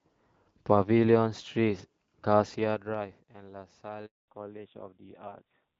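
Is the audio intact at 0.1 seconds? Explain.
Yes, the audio is intact at 0.1 seconds, with no audible fault at that moment.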